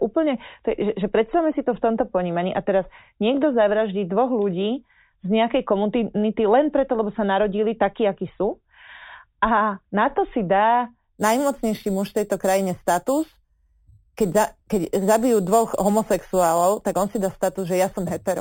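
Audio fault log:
11.17–18.41 s: imaging from sample-and-hold upsampling. Metallic fizz at 4 to 8 kHz, about 17 dB down, mirrors pitch inversely, fitting 8 kHz audio repeated up to 44.1 kHz.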